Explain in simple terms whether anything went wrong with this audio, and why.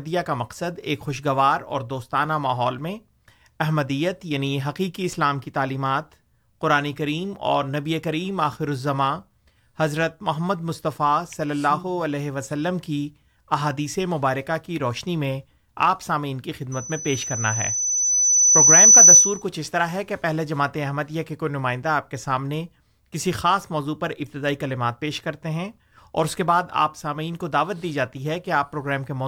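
A shrill 6 kHz whistle swells over about two seconds, from 16.72 to 19.43 s. This is loudspeaker feedback squeal: the microphone keeps picking up and re-amplifying its own loudspeaker.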